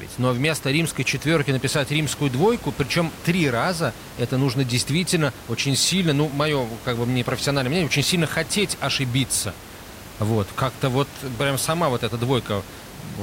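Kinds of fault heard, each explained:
No system faults in this speech clip; the only background is room noise sitting about 17 dB under the speech, which belongs to the recording itself.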